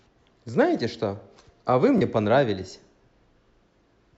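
Speech, with one Bluetooth stutter from 1.98 to 2.02 s: a slice of about 21 ms repeats where late or lost data left the receiver replaying its last buffer, which points to a single lost frame. Unlike a dropout, there's no silence; the speech resumes slightly ahead, as if it had played on.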